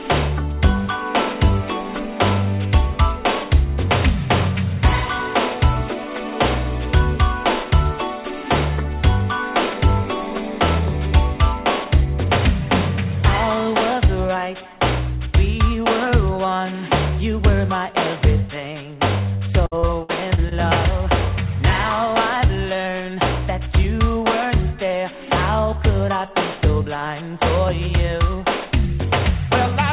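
Repeated packet loss (robotic sound) runs from 19.66 to 20.53 s. Five short holes open in quick succession, the longest about 57 ms. Each is patched by stretching the preceding sound, so nearly 0.2 s of the span (22 percent) is synthetic fill. The result is a choppy stutter with pieces audibly missing. Nothing reaches above 4 kHz through the call path, which fits G.711 mu-law at 64 kbps.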